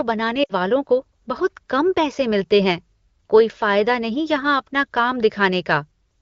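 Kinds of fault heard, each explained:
Lost AMR speech frames: radio errors corrupted a short run of frames, so the wideband decoder repeated its last good pitch and vocal tract settings at falling gain. From 0.43 to 0.51 s the speech dips to near silence, fitting about three 20 ms frames, before "वालों को".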